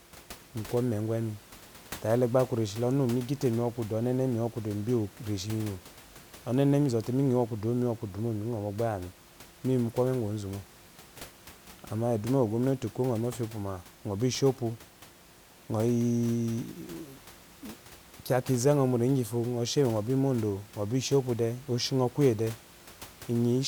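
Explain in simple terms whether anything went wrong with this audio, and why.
Nothing went wrong in this speech recording; the faint background noise is ordinary room noise picked up by the microphone, sitting well below the voice, not a system fault.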